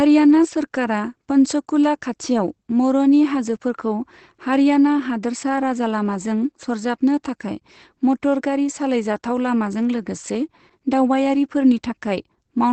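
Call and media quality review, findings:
Opus voice compression, entire clip: speech muffled, hoarse, slightly robotic. Spectrogram shows a hard ceiling near 8.6 kHz with smeared, grainy harmonics below. Points to wideband SILK linear-prediction coding with coarsely coded excitation; damage level fits around 12 kbps.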